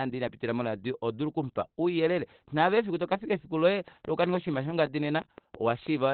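From the start, the whole clip has the sound of Opus compression, likely in its SILK speech mode at a low rate (the damage fits something around 12 kbps). Nothing survives above about 4.4 kHz, so the speech is narrowband: muffled and hoarse, with heavy codec damage throughout. At rates this low the encoder gives up on full bandwidth and switches to its speech coder, which trades away the top end and leaves a rough texture.

Then, from 3.88 s to 6.05 s, a train of clicks rides on top of it. The pulses arrive at a steady 6 per second, around fifteen of them, each much the same shape and peaking roughly 5 dB above the speech. So you hear a regular ticking over everything, pauses included. Something was likely injecting those pulses, such as interference from nearby equipment or a faulty connection or power supply.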